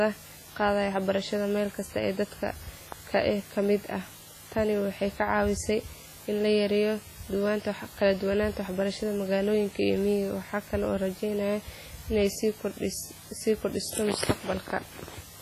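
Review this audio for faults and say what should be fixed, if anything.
Low bit depth with dither runs through the whole speech clip. The audio sits on only about seven bits, which fits a 7-bit path. Dither before rounding turns the error into a constant, even hiss about 20 dB below the signal. There is no distortion. Keep at least 16 bits through every stage.

The speech also sounds washy and ringing, with a hiss that breathes with the signal. Nothing remains above 15.1 kHz. The damage is heavy. This is likely WMA compression at a bitrate near 24 kbps. The coarse transform blocks smear quantisation noise over tens of milliseconds and drop weak components. Use a higher bitrate or a lossless format.

A loud pop occurs from 2.92 to 2.94 s. It is a single sharp pop, about 10 dB above the speech, and the speech carries on beneath it. A sudden voltage step or pulse was likely added to the signal, from a plug, switch, static or driver glitch. 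Secure connections and stabilise the audio driver before recording.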